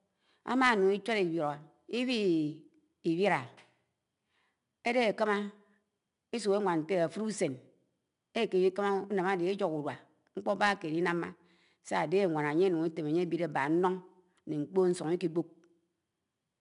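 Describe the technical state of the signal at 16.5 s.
At 16.5 s, as throughout, 4-bit ADPCM compression is plainly audible: coarse predicted steps leave gritty hiss tracking the speech level, unlike steady noise, with nothing above 10.6 kHz.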